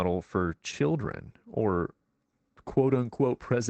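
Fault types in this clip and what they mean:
Lost packet rebuilt from error correction: around 0.47 to 0.53 s, right before "children or", about 40 ms turns rougher and noisier. That fits a couple of lost packets being refilled from the low-bitrate backup copy Opus carries in the following packet, so there's no gap.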